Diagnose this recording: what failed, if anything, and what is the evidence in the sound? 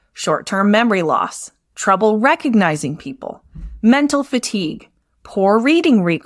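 Nothing stood out on listening to this speech recording, and no audible event points to a failure at any stage of the chain.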